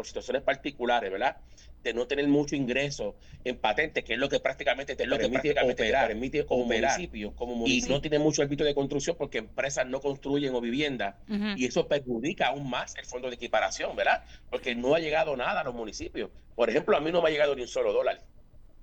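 From 5.04 to 8.04 s a doubled audio track appears: a second, equally loud copy trails by about one second, likely from a slower capture path.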